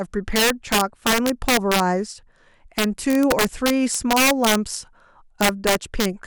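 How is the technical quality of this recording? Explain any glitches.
The recording is marred by integer overflow throughout the speech. The signal runs about 5 dB hotter than the integer format can hold, and instead of being limited, each peak that exceeds full scale wraps around to the opposite extreme. Only a small share of samples, under two percent, cross that line, but every one jumps across the entire range. The result is harsh, violent cracks on the loudest syllables, far sharper and more abrupt than ordinary clipping distortion.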